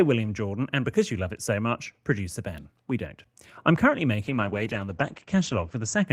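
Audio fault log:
4.23–6.13 s: call bitrate drop after "we don't I'm currently"; encoding falls from 32 to 12 kbps, bandwidth narrows from 20 to 8 kHz, leaving speech coarse and muffled to the end.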